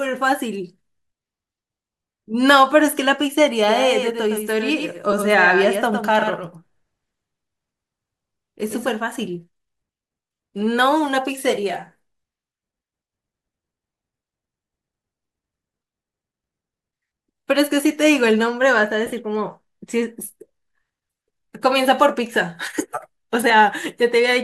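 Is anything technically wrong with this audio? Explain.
Yes, there are two problems in this speech clip, with light lossy compression underneath.

From 3.68 to 8.90 s there's a doubled audio track: a second copy of the speech runs about a tenth of a second behind, roughly 5 dB quieter. It's full-band and dry, with no room tail, so it reads as a slapback echo rather than reverb, and it cuts in and out abruptly at those edges. The likely cause is the same signal reaching the mix twice, once via a slower path, leaving the two copies out of step.

There are also lost LE Audio frames, where the Bluetooth LC3 decoder papers over gaps by reusing the last spectrum with scrambled phase. At 5.12 s it's a single 7.5 ms gap, heard as a tiny noisy blip. From 19.06 to 19.13 s it's worse: about 45 ms missing, scattered over 60 ms, with the longest stretch around 20 ms. That turns the speech there into a brief hissy smear.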